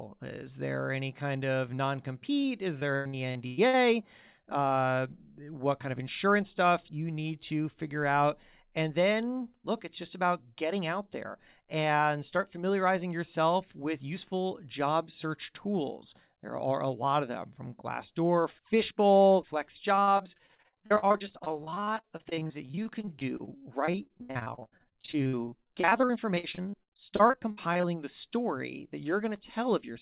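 Repeated packet loss (robotic sound) hits speech from 2.42 to 3.75 s, right after "any kind of non". Seven short holes, the longest about 102 ms, are patched by stretching the last sound. It returns from 19.95 to 27.85 s, ending before "the story that", with many holes. Roughly a third of each span is concealed, giving a choppy voice with pieces missing over narrowband audio that stops at 4 kHz, which fits G.711.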